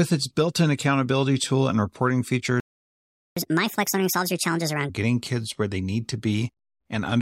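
A playback stall at 2.60 s cuts the speech off mid-flow, leaving about 0.76 s of silence until 3.37 s. This is likely the player running out of buffered data or having its output thread blocked, so nothing reaches the output until it recovers.

Catch-up at higher speed follows from 3.37 s to 4.89 s. The player drains its backlog by resampling, so the speech runs at 1.5 times normal speed and its pitch rises by about seven semitones. Both then fall back to normal once the lost time is recovered.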